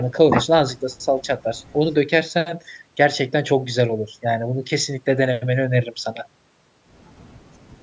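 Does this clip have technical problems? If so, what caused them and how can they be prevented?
No, there are no technical problems to trace or prevent. The speech comes through a call's microphone processing, so the lowest bass is filtered out and nothing is heard above 8 kHz, which is normal for that path.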